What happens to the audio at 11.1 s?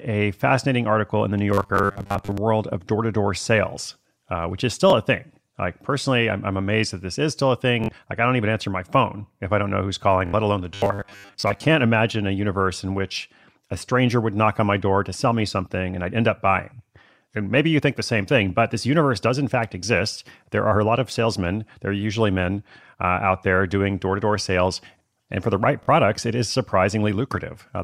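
At 11.1 s the speech collapses into a rigid, metallic buzz pitched at 100 Hz. It keeps only the rough shape of the speech. This robotic sound from repeated short buffers runs from 10.74 s to 11.60 s. The likely cause is audio arriving too slowly: the playback fills the gaps by looping the last 10 ms of audio, so much of that stretch is repetition rather than new sound, and the fixed loop length imposes the 100 Hz buzz.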